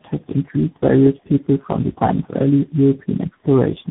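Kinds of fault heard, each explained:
Tandem speech coding: the speech passed through three speech codecs in a row, G.723.1, AMR-NB and finally CVSD, with G.711 links between them. Each codec re-encoded the previous one's damage. The result sounds rough, muffled and warbly, with nothing above 3.8 kHz.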